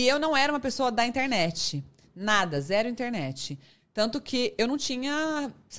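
Nothing goes wrong anywhere in this bit of speech, so there's simply no technical fault to point to.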